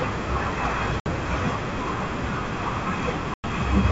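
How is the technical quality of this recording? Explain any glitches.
The recording has two audible dropouts, both in the speech carried over G.722 wideband coding at 64 kbit/s.

Packet loss on an ADPCM call occurs at 1.00 to 1.09 s, with 60 ms missing, and at 3.34 to 3.45 s, with 100 ms missing, which fits a few packets each time. Silence fills each gap. The decoder's adaptive predictor and step size drift out of step with the sender's, so speech returns after each hard-edged hole with a click, slight distortion or a wrong level before settling within tens of milliseconds.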